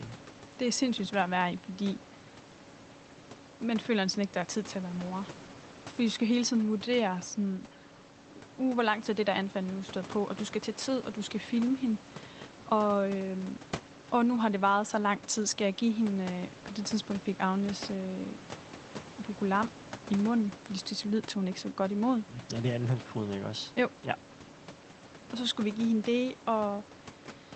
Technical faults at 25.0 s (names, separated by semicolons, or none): none